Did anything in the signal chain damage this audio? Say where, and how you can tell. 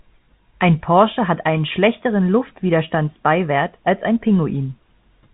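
No, nothing in the chain has damaged it; the speech simply sits inside a telephone band topping out near 3.8 kHz, which fits ordinary G.711 telephone coding at the usual 64 kbps doing its normal job.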